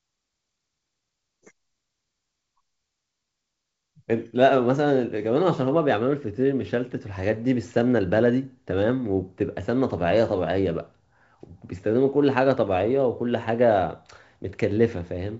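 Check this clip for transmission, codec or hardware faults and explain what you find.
No transmission, codec or hardware fault turns up in this speech clip: it has been carried over G.722 wideband telephone coding at 56 kbit/s, so the audio stops at about 7.7 kHz and carries only the light added noise of that coding, with the reduced bit rate leaving the lower band slightly grainier than it would be at full rate.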